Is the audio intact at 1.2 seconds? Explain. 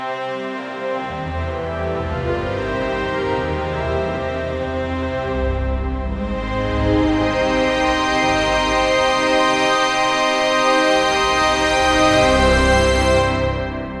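Yes, at 1.2 seconds the audio plays through cleanly, with no dropout, click, distortion or other fault at that point.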